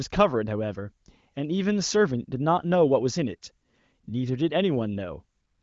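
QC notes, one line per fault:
No faults to log here, just speech carried over the AMR wideband (HD Voice) codec, with the audio stopping a little above 7 kHz and the coding sounding like one of its higher rates.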